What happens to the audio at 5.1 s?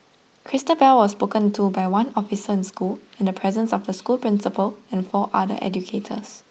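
Nothing goes wrong at 5.1 s: the speech carries on intact through the call path, with only the ordinary coding character of a call codec band-limited to about 12 kHz.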